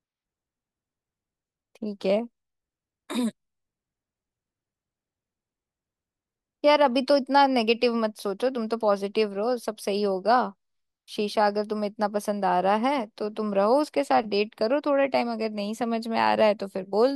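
No technical faults can be heard anywhere in the recording.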